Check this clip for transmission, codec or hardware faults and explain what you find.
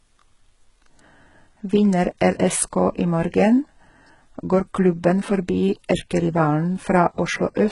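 One fault runs throughout the speech: heavy codec damage, likely from HE-AAC compression at a very low rate, consistent with roughly 12 kbps. Nothing is present above about 11.1 kHz. The codec carries only the lower spectrum in real detail and synthesises the upper band by replicating lower bands upward under a coarse envelope. The top end sounds artificial, with its harmonics misaligned against the coded band, so sibilants come out gritty, metallic and lispy.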